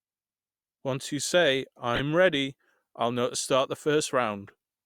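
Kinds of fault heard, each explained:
Corrupt frame decoded: 1.94–2.00 s, between "you say" and "ready I'll know to", and 4.47–4.50 s; damaged compressed frames were decoded anyway, leaving a loud glitch, then a faint one.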